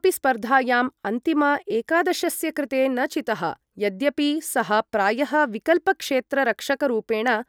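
No technical faults can be heard in this speech recording. The sound continues without interruption throughout.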